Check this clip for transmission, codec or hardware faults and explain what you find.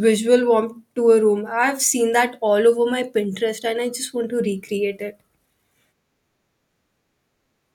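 No transmission, codec or hardware faults turn up in this clip.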